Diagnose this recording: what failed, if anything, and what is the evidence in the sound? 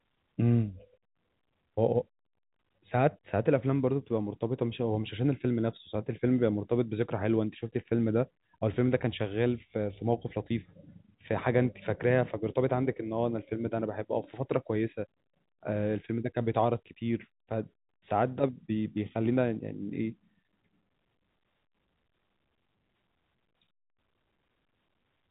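Nothing failed in this recording.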